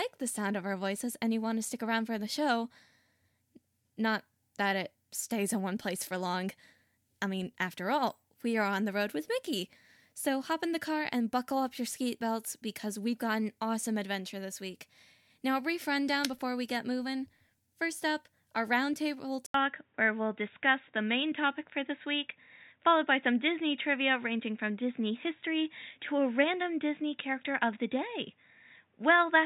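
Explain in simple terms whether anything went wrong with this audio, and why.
At 19.46 s, after "up our roundtable", a brief gap, then dull sound lacking highs above 3.8 kHz: likely an input switched to a poorer device.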